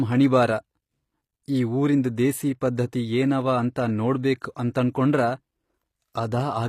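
Speech, with plainly audible codec damage throughout and nothing above 15.5 kHz. The treble stays bright but sounds synthetic: s sounds come out gritty and lispy, with a metallic sheen that doesn't quite match the lower voice. That points to HE-AAC compression, likely at a low rate around 24 kbps, where the upper band is rebuilt by spectral band replication rather than coded. Unlike a plain low-pass cut, the top end is present but false. At 4.39 to 4.42 s there is pre-echo: a short hiss runs about 26 ms ahead of a sharp attack, which arrives softened and smeared. The codec spread its block's quantisation noise into the quiet moment before the onset. What sets it apart from a click or dropout is that the noise comes before the transient rather than at it, and it blurs the attack rather than interrupting it.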